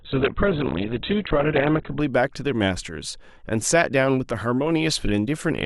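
From the start to 2.0 s the speech plays as an adaptive stream starting at a low bitrate: the player began on a cheap version of the stream and stepped up once it had gauged the connection. Until then nothing sounds above 4.1 kHz, so it is dull and muffled with grainy codec artefacts, which fits Opus at around 8 kbit/s. At 2.0 s the treble returns abruptly with no gap, consistent with a jump to roughly 64 kbit/s. A spectrogram shows a flat ceiling at 4.1 kHz that lifts in one vertical step.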